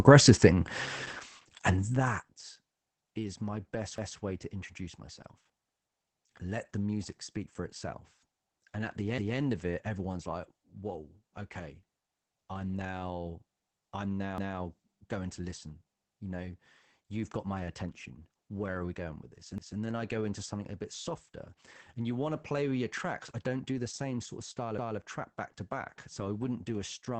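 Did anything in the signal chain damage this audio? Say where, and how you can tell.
Yes. The codec stage left Opus voice compression damage. The speech is muffled and slightly hoarse and robotic throughout, with nothing above 8.8 kHz. That band limit and coarse texture point to SILK coding at a low bitrate, around 12 kbps.

The chunking stage produced overlapping chunks. A 200 ms piece plays twice at 3.98, 9.18, 14.38, 19.58 and 24.78 s, heard as a stutter. The joins repeat every 5.2 s. Each 5 s chunk starts 200 ms before the previous one ends.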